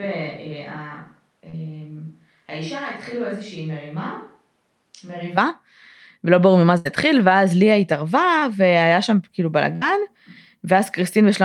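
Speech, and from the very start until 5.37 s it sounds roomy and hollow, thin in the bass, roughly 10 dB quieter, with room noise sitting about 35 dB below the speech, before it snaps back to a close, full sound. The likely cause is a switch to a distant microphone, with the close microphone's signal missing for that stretch. Two brief smears, at 1.49 to 1.55 s and at 8.39 to 8.44 s, are short concealed packet loss: the receiver bridged gaps of about 40 ms and 26 ms by extending the preceding sound, then blended back into the real signal. A longer burst of packet loss at 6.77 to 6.87 s and another at 9.76 to 9.83 s come across as a held, fading buzz or hiss. Roughly 80 ms and 60 ms of audio are skipped outright while the decoder continues and turns down the last sound. This all runs over an Opus call path whose bandwidth tops out at 12 kHz.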